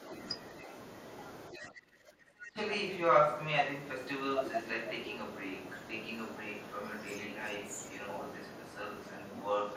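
A faint second voice flickers in at 0.58 to 0.64 s, sitting roughly 10 dB under the main speech: the other side's voice leaking through. It is likely the far end playing from the talker's loudspeaker and reaching the microphone, with the echo canceller leaving part of it behind. It returns at 1.53 to 1.7 s at about the same level as the talker. From 2.45 to 7.71 s it runs for a long stretch roughly 10 dB above the speech, then again at 7.93 to 9.25 s about 5 dB above. The last return comes at 9.41 s, continuing to the end roughly 15 dB over the talker.

Between 1.5 and 2.56 s the talker's voice sinks, dropping as far as roughly 20 dB and losing about a second of level in total. This is speech suppressed in double talk. With both sides talking at once, the echo canceller likely could not tell the local talker from the loudspeaker echo and pulled both down together.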